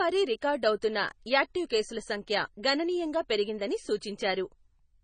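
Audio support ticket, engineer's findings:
Watery, swirly texture throughout; treble absent above 9.3 kHz; attacks smeared. Likely MP3 compression: a bit-starved encoder, consistent with about 24 kbps, cuts the top at a fixed frequency and drops weak frequency lines, which flicker between frames.

Brief hiss at 0.41 s, about 12 ms, right before "అవుతున్న యాక్టీవ్ కేసుల"; the onset sounds softened. Pre-echo: the codec spreads quantisation noise across a whole block, so noise sized for the loud attack leaks into the quiet gap ahead of it.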